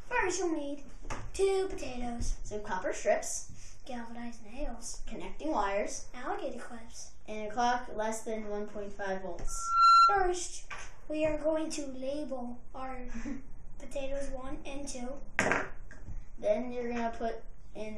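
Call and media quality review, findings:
Loudspeaker feedback squeal, 9.47–10.33 s: steady 1.4 kHz tone swelling over roughly 0.4 s to about 15 dB above the programme. Mic-to-speaker loop gain exceeding unity at that frequency. Spectrogram: bright horizontal line; waveform: growing sinusoidal envelope.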